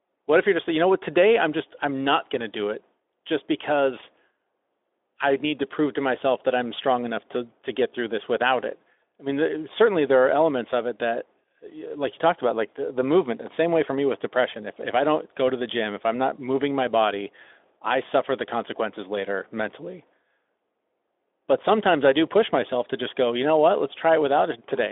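No technical faults can be heard in this recording.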